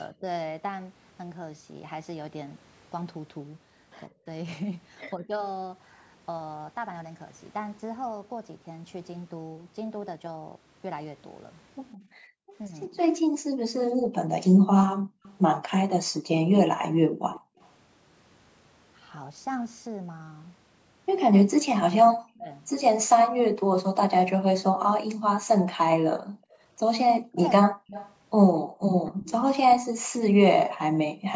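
At 0.12 to 0.25 s the talker's level dips by about 20 dB for a moment. This is speech suppressed in double talk. Both sides were likely talking at once. The echo canceller could not tell the local talker from loudspeaker echo, so it pulled everything down. A longer case follows at 4.08 to 5.41 s. Here the voice dips, about a third of a second in all, with drops near 25 dB.

From 11.93 to 17.69 s a faint second copy of the voice trails 162 ms behind, about 25 dB below it. This is echo leak. The far side's loudspeaker output was likely picked up by its microphone and not fully cancelled, so it came back.

Over nearly the same span, 11.97 to 17.59 s, the background is gated by the echo canceller. The room sound sinks by as much as about 40 dB while the loudspeaker plays, about two seconds in total. It returns when the canceller lets go.

Inside that span, at 12.67 to 12.97 s, the voice dips by about 10 dB. 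This is likely more double-talk suppression. At 21.51 to 22.49 s the suppression is much deeper. The voice falls by about 40 dB for most of a second.

From 23.08 to 31.24 s the background gating returns. The room sound drops out again, about 1.5 s in total and down to about 40 dB.

A stronger echo leak runs from 26.51 to 30.08 s. The copy lags by 194 ms and sits only about 15 dB under the voice. It likely comes from the same incompletely cancelled loudspeaker pickup.

During it, at 27.2 to 28.81 s, double talk likely causes another deep cut. The voice sinks by about 40 dB, around 0.7 s in all. Throughout the clip the call microphone processing leaves nothing above 8 kHz.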